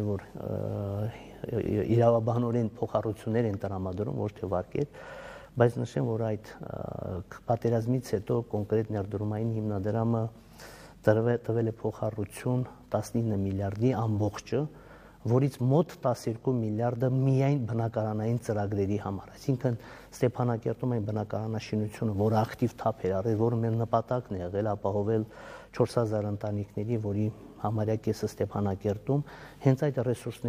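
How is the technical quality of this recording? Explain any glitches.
Nothing here sounds amiss, with no glitches turning up anywhere in the recording.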